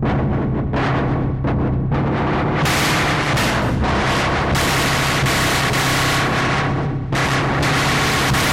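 Nothing is technically wrong with the audio in this clip.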